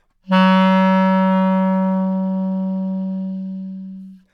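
Nothing here trips the ear at all; the sound just rolls along from beginning to end without a single technical hiccup worth pointing out.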